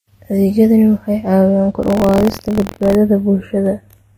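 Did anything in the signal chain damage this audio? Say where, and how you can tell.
Yes. At the converter or clocking stage, the channels are drifting apart throughout. The two sides run on separate clocks, off by around 30 ppm, so the inter-channel delay creeps to about a tenth of a millisecond. Summed to mono, slowly moving comb notches give slow flanging.

At the codec stage, the speech carries a mix of artefacts of more than one character. This points to transcoding between lossy codecs, likely a low-rate Vorbis pass re-encoded as AAC-LC at a similar rate.

At the driver or buffer stage, buffer tearing starts right after "waxay caawiyaan" and runs from 1.81 to 2.95 s. A rattling buzz at 43.1 Hz, fitting a 1024-sample buffer, appears where a small slice of each period replays audio from about a tenth of a second earlier, with hard joins.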